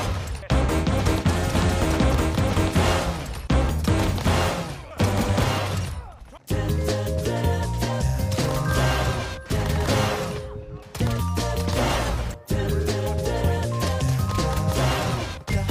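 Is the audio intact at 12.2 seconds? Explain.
No. 12.2 s falls inside a call bitrate drop lasting from 11.65 s to 13.09 s. The link's bandwidth estimate fell, and the encoder had to squeeze the audio into far fewer bits. The sound fits a fall from about 96 kbps to roughly 26 kbps, held for about 1.4 s. The audio turns rough and watery until the rate recovers. On a spectrogram the fine detail becomes patchy and smeared across that span. The waveform envelope barely changes.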